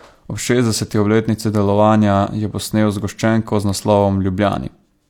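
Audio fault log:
Nothing to log here, as this bit of speech comes through without a single fault to point at.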